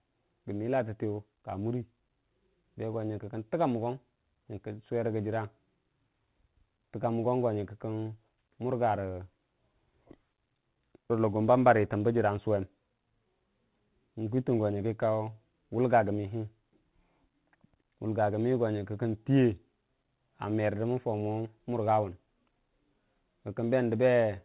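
No technical faults are audible.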